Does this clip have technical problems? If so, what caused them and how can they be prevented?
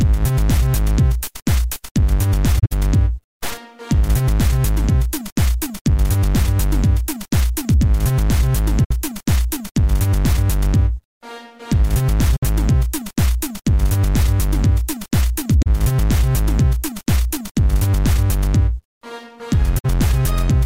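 Yes, there's corrupt frame concealment at 2.59–2.72, 8.84–8.91, 12.36–12.43, 15.63–15.67 and 19.78–19.86 s, where damaged AAC frames got muted or patched over by the decoder. Protect the stream with error correction or a reliable transport so bits don't get flipped.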